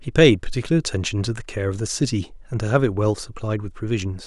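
Listening to this speech recording, nothing technical stood out as a problem.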